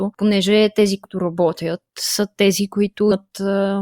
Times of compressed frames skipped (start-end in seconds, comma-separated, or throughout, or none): 1.04, 3.11-3.13